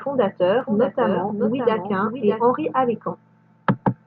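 It's a speech clip with a doubled audio track from 0.61 to 2.43 s: a second, full-band copy trails by roughly 0.7 s at around 5 dB down, dry and with no room tail, cutting in and out abruptly, likely from a slower second capture path.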